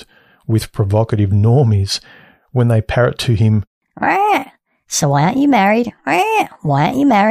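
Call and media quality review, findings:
No audible faults found in this speech clip.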